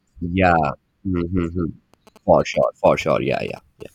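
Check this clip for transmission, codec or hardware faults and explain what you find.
One fault is present: GSM signalling bursts. They run from 1.94 s to 3.82 s, under the speech. A nearby 2G phone is exchanging short signalling bursts with the network, with no call in progress. The audio circuitry rectifies that radio energy into the signal. The result is a galloping dit-dit-dit pattern of brief buzzes at about 217 Hz. It sits well below the speech level, at roughly a quiet background.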